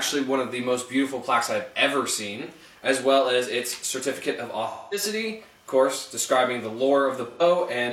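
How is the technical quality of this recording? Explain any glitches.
The recording has three dropouts from AAC frame loss with concealment. At 2.44 to 2.51 s, 4.68 to 5.03 s and 7.31 to 7.41 s, compressed frames failed to arrive, and the decoder rebuilt the gaps from the last good spectrum, fading it as the loss lengthened. The gaps of 43 ms and 85 ms fit one and two AAC frames and sound like brief smeared, phasey patches. The 213 ms gap, about five frames, decays toward silence before the sound fades back.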